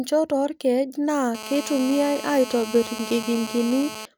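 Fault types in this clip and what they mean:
GSM phone buzz: a 2G handset nearby is on a call, bursting about 217 times a second, and the audio circuitry rectifies those pulses into a harsh, raspy buzz full of harmonics. It kicks in right after "oorkeej naa" at 1.35 s, holds steady at about 12 dB below the speech, and runs to 4.06 s.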